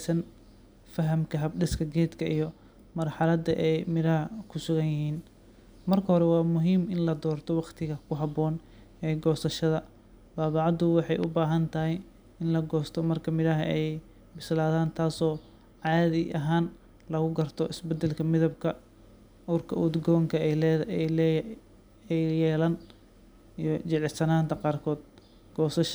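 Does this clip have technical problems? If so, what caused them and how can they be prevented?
Yes: two loud pops sit on top of the speech, from 11.24 to 11.26 s and from 15.87 to 15.89 s, the second right after "bislaadaan taasoo", each peaking a few decibels above the speech. A sudden voltage step, likely from a connector, switch, static discharge or driver glitch, entered the signal path. On a waveform each shows as a brief spike, and on a spectrogram as a thin vertical stripe spanning all frequencies. Secure cables, ground equipment, and avoid switching gear during recording.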